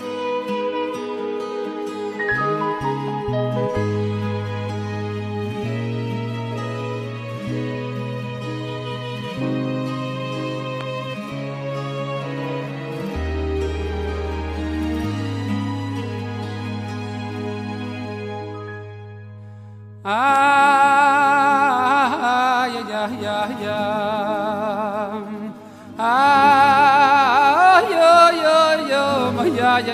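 At 10.81 to 10.83 s and again at 20.36 to 20.38 s, a single loud pop sits roughly ten decibels above the sound, which carries on underneath rather than dropping out, likely a voltage spike from a plug, switch or static.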